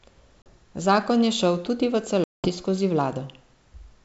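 Packet loss on an ADPCM call cuts hard-edged silent holes at 0.42 to 0.54 s (about 40 ms missing, likely a couple of packets) and at 2.24 to 2.48 s after "je šel tudi v" (200 ms, roughly ten). Unlike a simple dropout, the speech returns slightly distorted for a moment, because the decoder's predictor and step size must re-converge.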